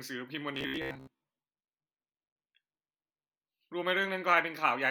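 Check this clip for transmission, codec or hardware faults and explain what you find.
One fault is present: robotic sound from repeated short buffers, from 0.55 to 1.21 s. The speech becomes a rigid, metallic buzz at about 66.7 Hz. That fits a 15 ms fragment repeated over most of the stretch. The likely cause is late audio, with the last buffer replayed to fill the gaps.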